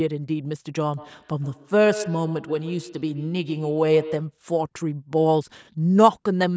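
From 0.97 s to 4.4 s the speech picks up a feedback echo between two devices: a second device in the same room replays the call, the first microphone catches it, and the echo canceller ignores sound it didn't play. Repeats return at roughly 150 ms intervals, peaking at about -12 dB below the speech. The fixed spacing of distinct copies sets it apart from room reverberation, which smears into a smooth tail. The call processing also leaves nothing above 8 kHz.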